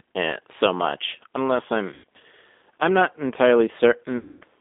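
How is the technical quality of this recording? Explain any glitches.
The recording's technical quality is poor: the whole clip is narrowband low-bitrate speech, and two dropouts break it up.

G.729 codec, throughout: the speech is carried at 8 kbit/s by a codec that rebuilds each 10 ms frame from a vocal tract filter, a pitch predictor and a few pulses rather than the original waveform. The line passes only about 250 Hz to 3.6 kHz, so it sounds thin and muffled, and the codec damage is plainly audible as a rough, slightly synthetic texture.

VoIP packet loss concealed by the speech codec, at 1.94 to 2.04 s, just after "so much unless I'm", and at 4.17 to 4.44 s: audio went missing, 100 ms and then 240 ms, and the decoder filled each gap by repeating its last pitch and filter settings at falling gain. The result is a stretched buzzy tone or coloured noise that fades, with the speech staying weak for a moment after it resumes. 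The longer second gap fits about twelve lost packets.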